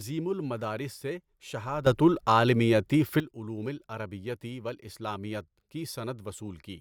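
Speech in which, at 1.87 s, the level suddenly leaps up by about 12 dB, with the background noise rising in step with the speech rather than only the speech getting louder. It stays at that raised level until 3.2 s, then drops back just as abruptly. This is a sudden gain jump, likely caused by a digital gain setting being changed instantly from one sample to the next, with no ramp to smooth the transition.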